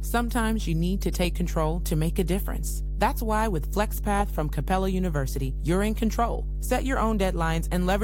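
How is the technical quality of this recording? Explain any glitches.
The recording has one clear fault. Mains hum at 50 Hz runs through the whole speech clip, about as loud as the talking itself. A ground loop or nearby transformer leaks the power line into the signal. Unlike broadband rumble, it is a steady, pitched low tone with harmonics.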